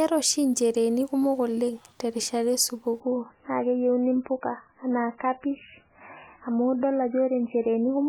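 Speech that switches abruptly at 3.0 s to an adaptive stream at a lower bitrate and stays there until the end at 8.1 s. With no gap at the switch, the treble simply vanishes, with nothing above 3 kHz, and the remaining sound turns thin and artefact-laden. The stream dropped from a quality that points to roughly 128 kbit/s MP3 down to something consistent with about 8 kbit/s MP3, as the player fell back after the connection slowed.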